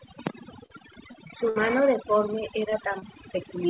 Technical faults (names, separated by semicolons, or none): overdone noise removal; short concealed packet loss; burst of packet loss